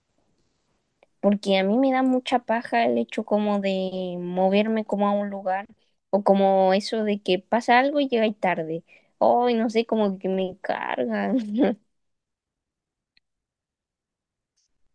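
No technical faults turn up anywhere in this speech recording. The audio holds steady throughout, with nothing out of place at any point.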